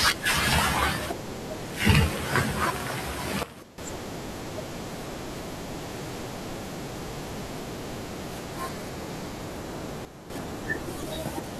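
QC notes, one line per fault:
3.43–3.78 s and 10.05–10.30 s, sudden gain jump: the level drops abruptly by about 14 dB in the first stretch and about 9 dB in the second, then returns, and the background noise falls and recovers together with the speech. Because both signal and noise move as one, the change sits in the digital gain rather than in the source. The step is likely a gain setting or bit shift applied between adjacent samples with no ramp, which is why the edges sound hard instead of fading.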